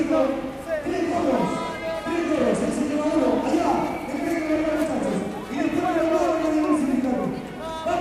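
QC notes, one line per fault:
No faults heard.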